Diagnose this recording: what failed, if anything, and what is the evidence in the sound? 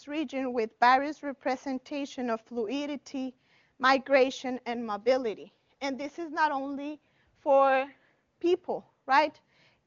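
Nothing failed; the recording shows no faults.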